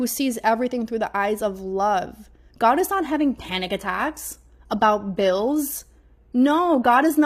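At 2.95 s the speech switches abruptly to an adaptive stream at a lower bitrate and stays there to the end. With no gap, the treble turns thin, with nothing above 14.9 kHz, and codec artefacts rise. This points to a step down from roughly 96 kbit/s AAC to a 20 kbit/s HE-AAC rendition after the connection slowed. Unlike a dropout or packet loss, the sound never breaks. The quality simply changes at once.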